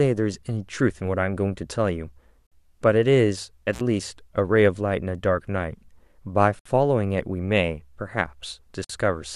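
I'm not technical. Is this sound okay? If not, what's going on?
No. The speech has two kinds of fault.

There are three gaps at joins of encoded pieces, at 2.47 s, 6.59 s and 8.84 s, lasting about 49, 62 and 52 milliseconds. The recording was encoded in separate chunks and stitched together untrimmed, so each seam holds a short hole of silence before the speech picks up where it left off.

There is also an intermittent contact dropout from 3.73 s to 3.81 s, with the line open for about 47 milliseconds. A loose cable or plug briefly lost connection, so the speech cuts out with a crackle at each edge and faint hiss fills the gap.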